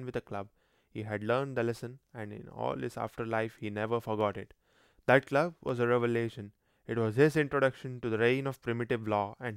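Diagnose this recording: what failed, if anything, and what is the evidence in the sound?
Two isolated sharp clicks break the speech, at 4.21 s and 5.69 s. Each is a single thin vertical line across the spectrum with no gap of silence, which points to dropped samples, a fraction of a millisecond lost each time. The likely stage is the driver or buffer, where the waveform jumps straight to a later value. A true dropout would leave audible missing sound, and wiring crackle would come in irregular bursts.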